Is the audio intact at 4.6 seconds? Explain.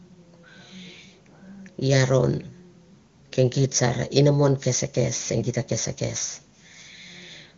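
Yes, the speech at 4.6 seconds is intact, carried cleanly by the AMR wideband (HD Voice) codec at a rate high enough that its band limit near 7 kHz is the only trace it leaves.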